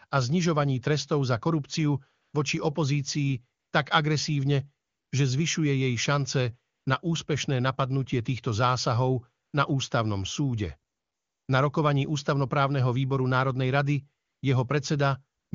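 AMR comfort noise appears eight times in this speech. Each time, the phone judges the talker silent, stops sending speech frames, and the receiver substitutes synthetic noise built from a rough level and spectrum estimate. This happens at 2.21–2.33, 3.59–3.71, 4.87–5.11, 6.75–6.85, 9.45–9.53, 10.91–11.47 (the longest, right after "ústavnom súde"), 14.25–14.41 and 15.39–15.51 s. The real background gives way to a smooth, steady hiss that switches in and out.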